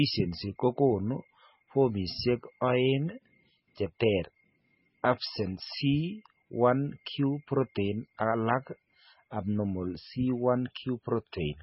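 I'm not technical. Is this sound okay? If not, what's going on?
No. The speech sounds dull and watery from start to finish. Nothing above about 5.6 kHz survives, so s sounds lose their crispness. Quiet detail swirls in and out. This is likely heavy MP3 compression, squeezed too hard to save space.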